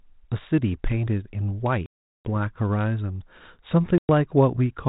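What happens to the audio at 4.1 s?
Packet loss on an ADPCM call: a hard-edged 110 ms silence from 3.98 to 4.10 s, around ten packets. Unlike a plain dropout, the sound comes back slightly distorted while the decoder's predictor and step size re-sync.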